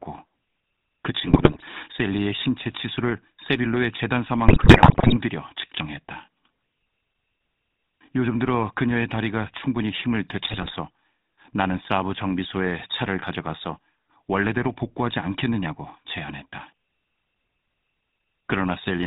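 GSM full-rate codec coloring runs through the whole clip, its sound pointing to a 13 kbps full-rate stream. The codec rebuilds the speech from a vocal-tract model excited by regularly spaced pulses, keeping only every third excitation sample, and passes nothing above 4 kHz, leaving a plainly audible buzzy, gravelly roughness.

GSM bit errors strike from 1.26 to 1.65 s, from 4.48 to 5.15 s, and from 10.43 to 10.71 s. Corrupted filter, pitch and gain values bend the spectrum and spike the level frame by frame, so the speech breaks into squawks, pops and gargling, worst in the middle burst.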